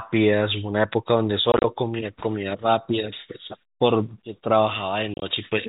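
Telephone-band speech, cut off above 4 kHz by G.711 coding, is broken twice by packet loss filled with silence, from 1.52 to 1.64 s and from 5.14 to 5.22 s. Gaps of up to 30 ms, which fit 10 ms packets, drop to dead silence with hard edges rather than the smeared repeats that concealment would leave.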